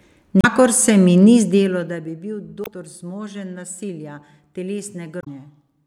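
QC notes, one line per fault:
0.41 to 0.45 s, damaged data in a compressed stream: a short glitch just before "se mi", where corrupted frames confuse the decoder, it loses sync and hunts for the next good frame header, so you get a blip. The same thing happens at 2.63 to 2.68 s, right before "zmožen nasilja", and again at 5.20 to 5.27 s, each a brief glitch.
1.30 to 2.23 s, zipper noise: just after "se mi" the level drops by roughly 15 dB, but in 1 dB steps at about 20 steps a second instead of a smooth ramp. Every step is an abrupt gain jump that leaves a tiny click on the waveform, so you hear a fine ticking or zipping laid over the sound for the whole fade, which points to gain being updated once per buffer with no interpolation.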